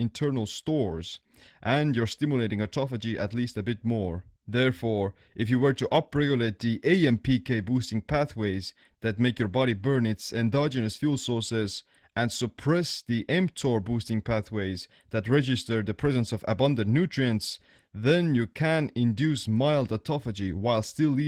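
Opus voice compression runs throughout this speech clip and is plainly audible: the voice sounds hoarse and slightly robotic, which fits hybrid coding at a low bitrate around 16 kbps, with coarse linear-prediction excitation below 8 kHz and a thin CELT layer above it.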